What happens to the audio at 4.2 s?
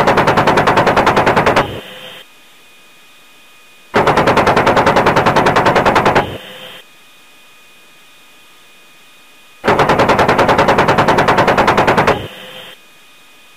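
At 4.2 s you're hearing the same harsh, buzzy grit that runs through the whole clip, and it rides along in any quieter stretches as a steady noise floor. That's a stuck bit, likely from a bad data line or converter holding one bit fixed. Roughly half the samples land off by that bit's weight, around minus 40 dBFS. Because the error flips with the sign of small values, even near-silence turns into noise.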